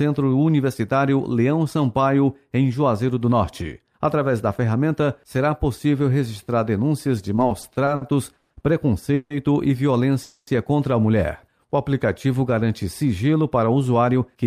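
From 7.35 to 8.52 s the audio shows repeated stalls (stutter): seven short gaps, the longest 130 ms, where the jitter buffer ran dry and the receiver stretched the last sound to cover them. About 290 ms was filled in this way, roughly a quarter of that span. Nothing is lost, but the passage drags and stutters.

At 9.14 to 9.32 s and again at 10.23 to 10.49 s there is a call audio freeze, 160 ms and then 240 ms long. The last sound is held as a fading buzz that never quite reaches silence, and the audio then resumes where it stopped. The likely cause is packets delayed in transit, which drained the jitter buffer and added 160 ms and 240 ms of delay.

From 11.66 to 12.08 s a jitter buffer slow-down plays the audio at 92% speed. The receiver repeated pitch-period-sized pieces to rebuild its reserve, adding 39 ms in total. The pitch stays the same while the sound is drawn out and slightly sluggish.

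From 13.93 to 14.44 s a jitter buffer speed-up runs the audio at 107% speed. With excess audio queued, the receiver cut short pitch-period pieces, about 40 ms in total. Pitch is unchanged, but the end of the clip sounds noticeably hurried.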